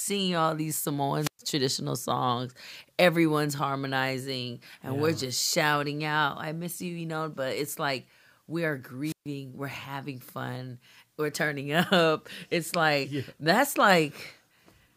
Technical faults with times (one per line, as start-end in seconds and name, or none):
1.19-1.39 wireless microphone squelch dropout
9.04-9.26 wireless microphone squelch dropout